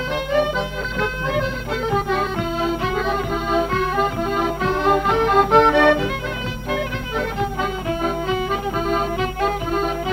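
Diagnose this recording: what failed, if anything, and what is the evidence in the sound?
DAB burbling from weak reception, failing at the codec stage: from 0.81 to 1.00 s, short blips of noise appear in single sub-bands. Bit errors slipped past error correction, corrupting the MP2 audio data across nine frames, which fits a bit error rate of a fraction of a percent. A spectrogram shows isolated sub-band blocks flaring frame by frame.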